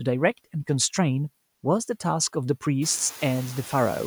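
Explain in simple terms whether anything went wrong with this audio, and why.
Noise suppressor artifacts, throughout: a filter keeps pushing background noise down between words, so it pumps up and down under the speech. The room noise itself grows naturally around 3 seconds.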